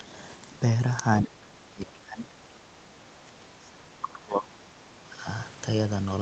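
From 1.25 to 5.26 s the speech dips hard, by something like 25 dB, and breaks up, likely speech suppressed in double talk by an echo canceller.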